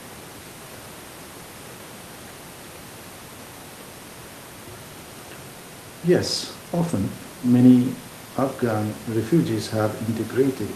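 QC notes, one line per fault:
No faults found in this clip.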